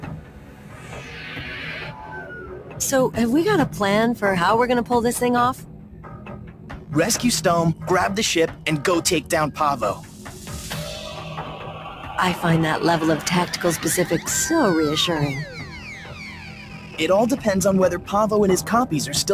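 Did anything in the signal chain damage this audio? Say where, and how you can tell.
Yes. The damage happens in call processing: a noise suppressor designed for speech was left running on material it wasn't built for. This is a noise suppressor applied to music or sounds. It treats sustained, steady content as background noise and pulls it down, so the level keeps swinging by roughly 10 dB through the whole clip. Held sounds and tails sink while onsets pass, giving a pumping, thinned-out quality.

The clearest evidence is sound cut by the noise suppressor at six points: 0.0 to 1.13 s (about 7 dB down), 2.59 to 2.79 s (about 6 dB), 5.57 to 6.92 s (about 7 dB), 9.96 to 10.5 s (about 6 dB), 15.54 to 15.81 s (about 5 dB) and 15.99 to 16.98 s (about 6 dB). In each stretch the steadier or decaying parts drop below their surroundings or have their decay clipped short.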